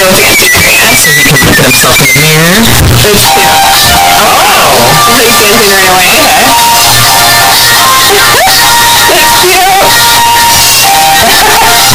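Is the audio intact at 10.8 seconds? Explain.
No. At 10.8 seconds, as everywhere in the clip, the sound is a harsh, very loud distortion in which quiet moments come through as loud as the rest, with every zero crossing becoming a jump across the full range. The likely cause is signed and unsigned samples mixed up in the 8-bit data: the top bit is flipped on reading, so values near zero land at the extremes.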